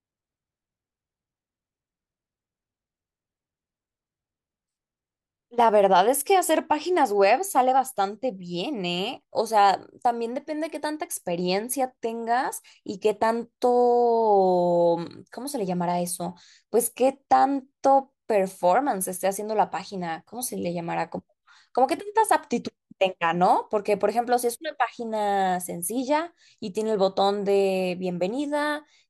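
No audible technical faults.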